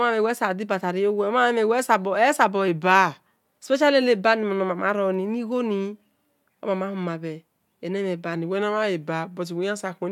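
Speech with two drift correction steps, 2.68–3.27 s and 8.35–10.08 s: playback slows about 6% and drops roughly a semitone, then snaps back, likely a clock-matching rate adjustment.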